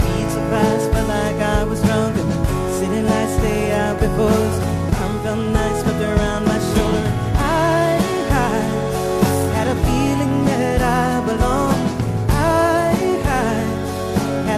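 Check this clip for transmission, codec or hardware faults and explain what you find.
I find no faults to explain in this clip.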